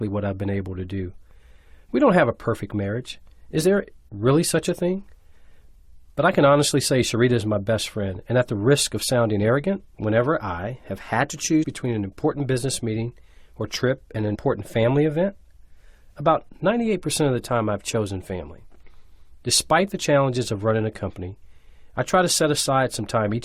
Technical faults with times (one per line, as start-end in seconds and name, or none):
11.62-11.64 compressed frames skipped